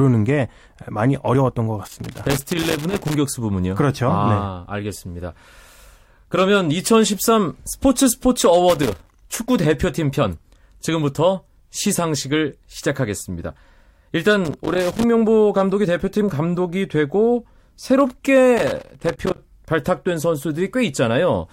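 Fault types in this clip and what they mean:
Loose connector crackle: a worn or dirty contact somewhere in the cable or jack path keeps making and breaking as it shifts, so the signal is chopped on and off in rapid, irregular bursts. In this speech clip that shows up as four separate stretches of scratchy crackling over the voice, at 1.87 to 3.14 s, 8.69 to 9.13 s, 14.45 to 15.04 s and 18.57 to 19.38 s, each lasting under a second and a half.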